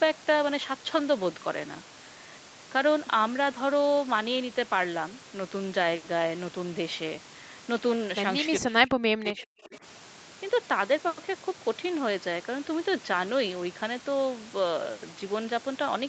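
From 8.61 to 9.83 s the speech sinks sharply, down by something like 40 dB at its deepest, and breaks up for about a second in total. That's likely speech suppressed in double talk, with the echo canceller mistaking the talker for loudspeaker echo while both ends spoke.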